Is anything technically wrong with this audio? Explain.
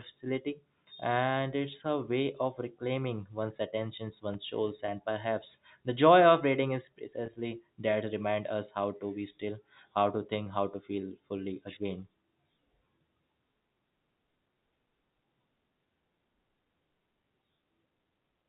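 Yes. At 4.34 s there is a brief loose connector crackle, about 13 ms long. A worn contact briefly broke and remade the circuit, chopping the signal into a sharp scratchy tick. On a waveform it shows as a cluster of jagged spikes, and on a spectrogram as a thin broadband vertical streak.

Packet loss with pitch repetition occurs three times, at 4.86 s, 7.26 s and 10.44 s. Each gap is 20 ms, which fits a single lost packet. The receiver filled it by looping the last pitch period, so each spot sounds like a tiny held, buzzy catch in the speech. On a spectrogram the harmonics freeze flat for that instant. On a waveform identical repeated cycles appear.

The speech is carried over G.711 mu-law telephone coding at 64 kbps, so nothing above 4 kHz is present.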